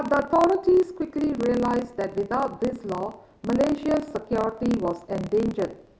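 From start to finish the speech carries a block size mismatch (truncated): each block's tail is discarded, producing a 36.3 Hz buzz and delivery about 1.09 times fast at near-normal pitch. A waveform shows regular splice discontinuities; a spectrogram shows evenly spaced vertical striations.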